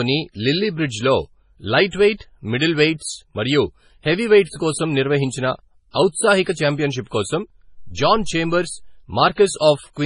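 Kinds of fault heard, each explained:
MP3 compression: Heavy watery, swirly damage runs through the whole clip, with nothing above 10.5 kHz, which fits a low bitrate around 24 kbps and likely MP3 coding; unlike pre-echo, it never stops.
dropped samples: A single sharp click at 6.04 s, a thin vertical line in the spectrum, likely a tiny fraction of a millisecond lost, too brief to remove any sound, unlike a dropout.
pre-echo: At 9.33 s a short hiss leads an attack by 48 ms, coding noise spread ahead of it, so the attack sounds smeared, unlike a click's instant jump.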